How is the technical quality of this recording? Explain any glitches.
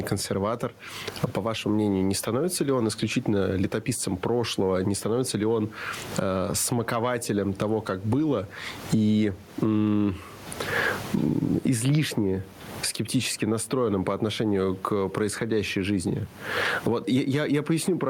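The recording is marred by gain pumping throughout the speech: the gain swings around 20 dB, ducking under each loud syllable. The likely cause is excessive microphone gain with a fast limiter clamping down, which squashes loud and soft passages together. The room noise sits about 35 dB below the speech.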